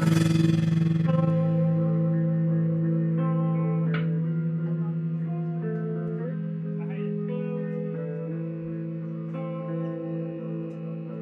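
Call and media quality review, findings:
Overlap-add ripple, 0.00 to 1.32 s. Level pumps by about 11 dB at roughly 20 Hz, a rough flutter. Probable component: frame-based processing stage, window and overlap mismatched. Mechanism: overlapping windows sum unevenly, so gain dips and peaks once per frame. Frame rate near 20 per second. Check synthesis window and hop settings.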